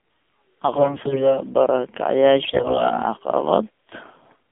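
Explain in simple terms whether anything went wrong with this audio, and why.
The speech went through the AMR narrowband mobile codec, the voice codec used on older 2G and 3G mobile calls. It keeps only a narrow band, roughly 200 Hz to 3.5 kHz, so the voice sounds thin and muffled. At its low data rate it also rebuilds speech from a simple model of the throat, which adds an audible buzzy, synthetic edge.

On top of that, there are two bursts of AMR bit errors, from 0.76 to 1.40 s and from 2.44 to 2.92 s. Some of the transmitted data arrived corrupted, so the decoder rebuilt the voice from wrong details. Pitch and loudness stay roughly intact, but the voice turns hoarse, scratchy and gargly. The second burst sounds worse because more of its data was damaged.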